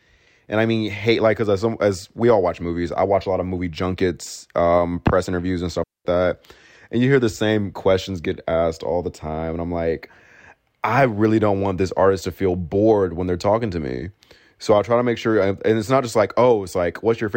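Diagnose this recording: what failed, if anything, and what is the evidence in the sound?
A digital wireless dropout cuts into the speech right after "um press interviews and", from 5.84 s to 6.05 s: a clean hole of near silence lasting about 217 ms. This failure sits in the wireless link and receiver. Too much data went missing, so the receiver muted with a very fast fade rather than passing corrupted audio. No noise burst or crackle comes before or after the gap, which sets it apart from an analogue wireless dropout or a loose cable.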